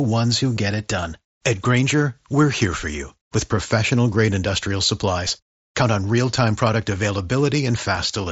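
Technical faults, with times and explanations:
0.55 s, 3.56 s, 5.28 s and 7.96 s, concealed Bluetooth headset packet loss: four tiny dropouts on the headset link, between "ones who" and "it done", between "here for you with" and "grade industrial", just after "grade industrial", and near the end. Each gap is 7.5 or 15 ms, which fits one or two lost frames. The phone filled each one by repeating a closely matching slice of the preceding waveform, so the single-frame ones are nearly hidden rather than heard as silence, all over the slightly grainy wideband mSBC sound.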